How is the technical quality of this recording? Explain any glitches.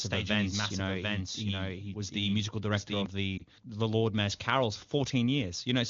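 Two glitches stand out in this speech, which comes through the AMR wideband (HD Voice) path at a rate that fits 23.85 kbit/s.

From the very start until 3.06 s there's a doubled audio track: a full-band copy trails about 0.7 s behind, roughly 5 dB down, and cuts off abruptly, likely from a second, slower capture path.

Then at 3.38 to 3.43 s there's a lost AMR speech frame: one corrupted frame gets patched from the previous one, giving a quick dip or warble.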